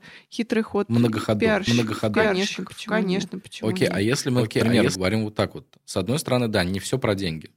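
Between 1.67 and 4.95 s, the speech signal was likely captured a second time through a slower path, producing a doubled audio track. A full-band copy trails roughly 0.7 s behind at about equal loudness, completely dry, and cuts in and out abruptly.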